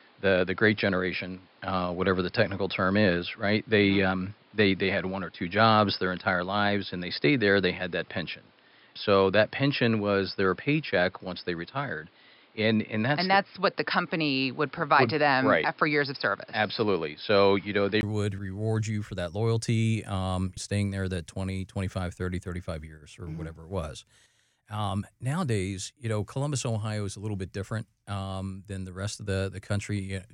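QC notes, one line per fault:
0.00 to 18.03 s, input switched to a poorer device: the speech is dull and boxy, with nothing above 5.2 kHz, a slightly different level and a faint noise floor well below the speech, until a brief gap of about 20 ms at 18.03 s. From "would reward you for" the sound opens up and clears. The likely cause is recording on a narrower-band microphone or headset profile, then switching back to the main input.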